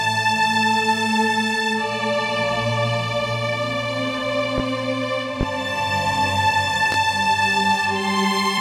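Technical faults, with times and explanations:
4.58–4.62 s, 5.41–5.44 s and 6.92–6.96 s: loud pop, three separate sharp single pops, each lasting about 35 ms, the first peaking about 10 dB above the surrounding sound and the other two about 15 dB above it. The audio carries on unbroken beneath each one. The likely cause is a sudden voltage pulse, from a plug, switch, static discharge or driver glitch, added to the signal and briefly shaped by the circuitry that follows.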